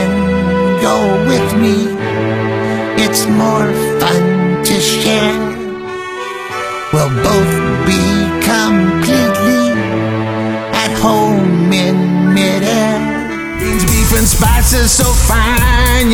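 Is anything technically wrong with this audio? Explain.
No, nothing is technically wrong with this audio.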